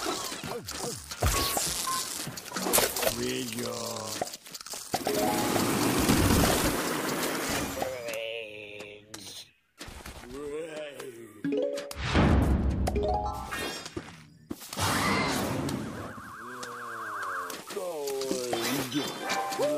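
No technical faults can be heard anywhere here.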